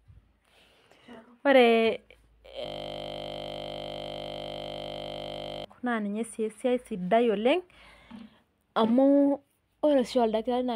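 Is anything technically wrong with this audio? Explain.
Yes. From 2.66 s to 5.65 s the speech is interrupted by a system hang loop. The computer or audio driver stalled, but the sound hardware kept replaying the same short stretch of its ring buffer. That buffer held only 20 ms, which points to a very small buffer. Because it repeats about 150 times at 50 times per second, the speech gives way to a steady, monotonous buzz at 50 Hz for roughly three seconds before normal playback returns.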